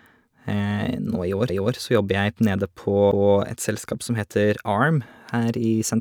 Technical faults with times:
1.49-1.75 repeated frames
3.11-3.37 repeated frames

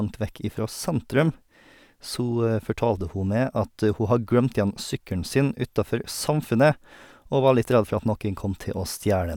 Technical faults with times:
none

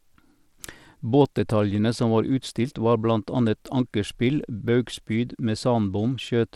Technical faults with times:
0.00-6.56 Bluetooth SBC compression

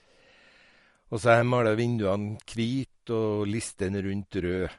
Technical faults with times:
0.00-4.78 MP3 compression

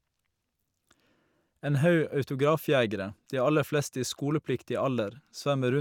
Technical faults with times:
none

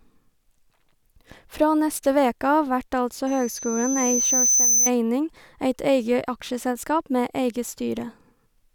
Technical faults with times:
3.27-4.90 loudspeaker feedback squeal

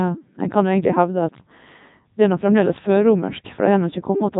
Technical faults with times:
0.00-4.39 Codec 2 vocoder

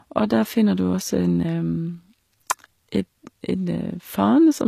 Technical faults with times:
0.00-4.67 HE-AAC compression
2.51 electrical switching spike

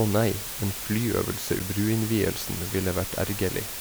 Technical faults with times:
0.00-3.81 low bit depth with dither
1.59 CD skip

